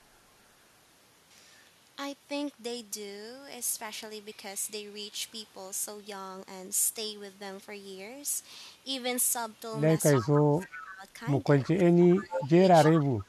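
From 10.15 to 10.27 s an echo leak appears: a faint copy of the speech returning 301 ms late, about 15 dB down, likely from a far-end loudspeaker the echo canceller failed to fully cancel. Overlapping it, 10.18 to 11.03 s, speech suppressed in double talk dips the voice by up to about 15 dB, likely because the canceller mistook near-end speech for echo during overlap. Another echo leak, 10.61 to 10.8 s, sits about 20 dB down. From 11.62 to 12.62 s suppression cuts deeper, around 25 dB. Echo leaks recur at 12.33 to 12.44 s (about 10 dB down) and 12.84 to 13.05 s (about 15 dB down). A final dip of about 15 dB runs from 13.16 s to the end.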